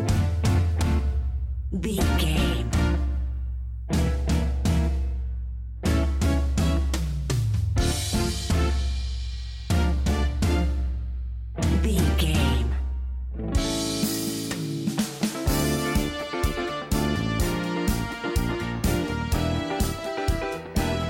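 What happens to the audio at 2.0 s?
Nothing goes wrong at 2.0 s; the audio plays through that moment intact, with no audible fault.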